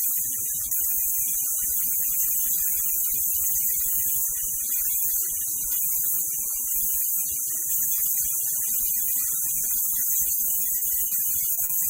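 From 10.35 to 11.13 s the audio breaks up with repeated packet loss. Five gaps, none longer than 40 ms, total 140 ms. That is about 18% of the stretch. Each hole is filled by extending the preceding sound. The result is choppy, with pieces missing.

Two short concealed packet losses follow, at 11.53 to 11.59 s and 11.65 to 11.71 s. Each drops 40 ms. The receiver patches it from the last sound, then blends back. Each is heard as a brief smear or wobble.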